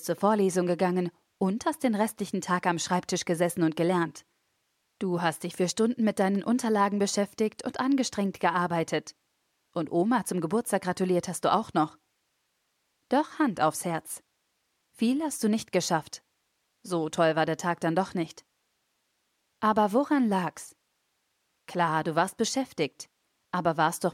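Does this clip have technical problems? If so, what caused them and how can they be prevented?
No, this clip has no technical problems, so there is nothing to trace to a cause or to prevent.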